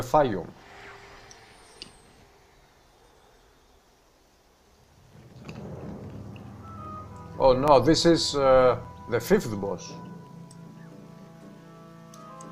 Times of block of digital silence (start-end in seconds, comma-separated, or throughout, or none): 7.68, 8.84